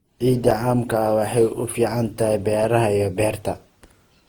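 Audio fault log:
throughout, generation loss: swirly, smeared, hollow sound with blurred onsets, likely from about five lossy re-encodes, fitting Opus near 48 kbit/s; the spectrogram shows smeared transients.
0.51 s, block of digital silence: a 6.5 ms stretch of silence heard as a tick; the waveform drops flat with abrupt edges, leaving a thin empty vertical stripe on the spectrogram.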